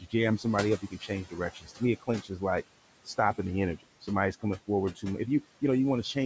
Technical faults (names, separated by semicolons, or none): noise suppressor artifacts; speech cut by the noise suppressor